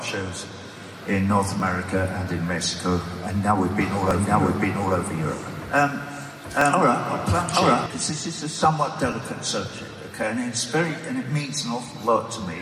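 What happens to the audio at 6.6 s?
Overlapping chunks at 6.61 s: the audio seems to be handled in 2.5 s chunks, and this one starts before the previous one ended, so 6.5 ms plays twice and a brief click or stutter results.

A doubled audio track also runs from 3.81 s to 7.86 s: a full-band copy trails roughly 0.7 s behind at about the same level, with no decay, likely from a slower second capture path.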